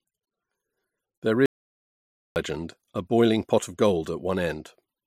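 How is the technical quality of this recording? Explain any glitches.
The recording has one clear glitch. An audio dropout to silence runs from 1.46 s to 2.36 s, losing about 0.9 s of speech. The signal was likely lost at the input, through a disconnect, a failed link or a brief mute, while recording carried on writing silence. The speech stops abruptly mid-flow. The gap is total silence, with no room tone underneath. Speech returns suddenly on "a boiling pot of". Whatever was spoken during the gap is gone.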